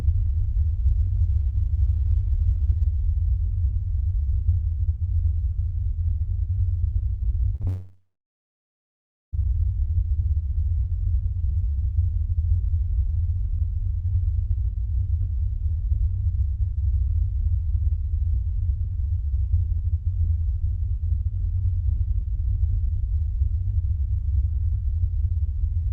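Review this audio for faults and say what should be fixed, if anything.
Short concealed packet loss, 7.55 to 7.62 s and 7.62 to 7.65 s: two back-to-back gaps of about 40 ms and 20 ms never reached the decoder in time, so the receiver extended the preceding sound and crossfaded back into real audio. On this everyday-sound recording that comes across as a brief smear and wobble just before the larger break, with the original detail in those few hundredths of a second replaced. Prevention: give the jitter buffer enough depth, or add forward error correction, so short losses are recovered instead of synthesised.

Long network dropout, 7.67 to 9.35 s: no audio arrived for about 1.7 s, likely because the network connection stalled. The concealment briefly carried the last sound forward as a fading buzz or hiss, and the remaining 1.33 s or so is near silence before the sound resumes at 9.35 s with that stretch missing for good. 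Prevention: stabilise the link, with wired or better-provisioned networking and congestion monitoring, so the stream is never interrupted for seconds at a time.

The call path's Opus coding limits the audio to about 8 kHz bandwidth, consistent with a setting around 24 kbps.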